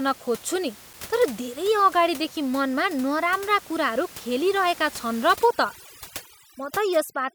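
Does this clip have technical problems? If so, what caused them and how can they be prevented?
Yes. At 0.93 s there is a CD skip: a short tick and a momentary mute of a few milliseconds, after which the speech resumes from a different point in the program. A physical knock or a flaw on the disc made the laser lose tracking and land on a neighbouring turn of the spiral, so playback jumps forward or back by whole disc revolutions. Prevention: rip the disc with an error-checking extractor from a clean, undamaged disc in a stable, vibration-free drive.

From 5.36 s to the end, overdone noise removal is audible. The room noise, which sits about 19 dB below the speech and is part of the original recording, collapses into near silence speckled with twinkling artefacts. The reduction was set so aggressively that any frequency band falling close to the noise estimate was pulled far down or gated off, and quieter components of the speech were removed along with the noise. 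Prevention: apply gentler reduction with a conservative threshold and limited attenuation depth, and check the result by ear before committing.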